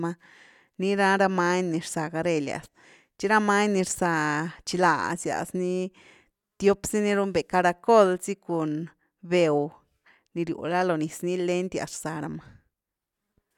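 No technical faults can be heard anywhere in the recording; the signal stays steady and intact throughout.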